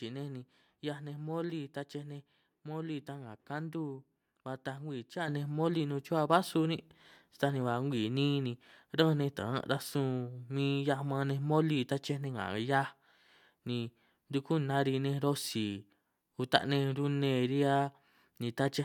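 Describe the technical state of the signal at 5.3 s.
At 5.28 s, between "ba taaj ngwii cha" and "nej moli nun", the microphone volume steps up. Software raised the input gain by about 7 dB at once. Voice and background jump louder together.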